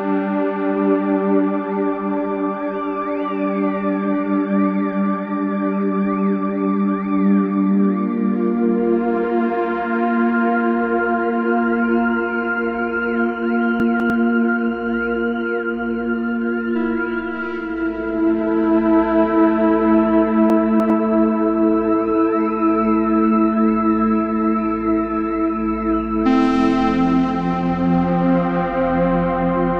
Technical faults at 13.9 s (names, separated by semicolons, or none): chunks out of order